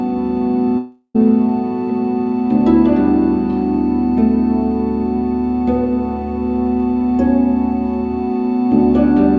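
From 0.78 to 1.16 s the sound breaks off and is replaced by a smeared continuation of its last moment, a buzzy hiss that fades over most of that stretch and ends in a brief silence of about 40 ms. When the audio resumes, roughly a third of a second of material is gone. This is likely a long network dropout. A short packet-loss glitch would be far briefer, and a simple mute would give no fading tail. Throughout, nothing is heard above 8 kHz, which fits a wideband call codec such as G.722.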